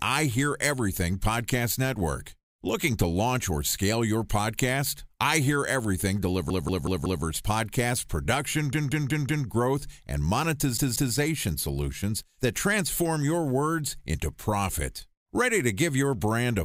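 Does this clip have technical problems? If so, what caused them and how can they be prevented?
Yes, a repeated buffer stutters the speech three times: 6.50–7.25 s before "podcast production", 8.73–9.47 s after it, and 10.77–11.15 s before "solutions that transform your". The same roughly 186 ms chunk loops with hard joins, which fits an 8192-sample buffer replayed when fresh audio arrived late. Larger buffers with steady scheduling, or more headroom for the audio thread, would prevent it.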